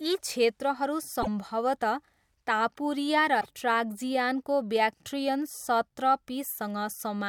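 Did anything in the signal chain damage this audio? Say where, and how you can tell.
Yes. At 1.21–1.28 s, right after "यी क्षेत्रहरू", and again at 3.40–3.46 s, the audio skips ahead with a brief glitch. That's likely a broken MP3 bit reservoir: frames went missing, and the next ones decoded against the wrong borrowed bytes.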